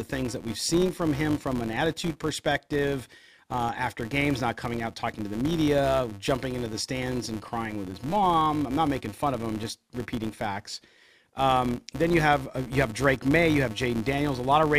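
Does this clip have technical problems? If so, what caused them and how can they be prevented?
Yes. Throughout the speech there is a filter restarted on every block. A buzz at 200 Hz runs under the speech and tracks its level. Each processing block starts its filter from silence instead of carrying the state over from the previous block, so every block boundary produces a small transient. At 200 repeats per second, those ticks fuse into a buzz, which fits blocks of, for example, 240 samples at 48 kHz. To prevent it, preserve each filter's state between blocks rather than reinitialising it.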